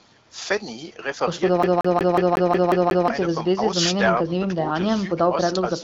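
A CD stuck on one turn runs from 1.63 to 3.08 s. A scratch keeps knocking the laser back to the same spot on each rotation, so one 0.18 s slice of the speech repeats eight times, with a brief mute at every jump. The result is the quick, evenly spaced stutter of a skipping disc. Throughout, the band stops near 7.7 kHz with light coding texture, which points to AMR wideband (HD Voice) coding at a mid-to-high rate.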